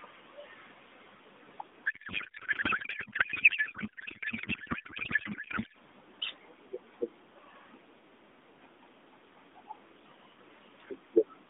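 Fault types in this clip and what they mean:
Codec payload misread, 1.86 to 5.76 s: the AMR frames were packed octet-aligned but unpacked as bandwidth-efficient, so every field is read from the wrong bit positions. The speech collapses into garbled, warbling noise that barely tracks it, until the format matches again.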